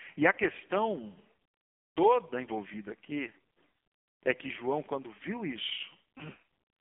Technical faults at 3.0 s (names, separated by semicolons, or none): AMR narrowband mobile codec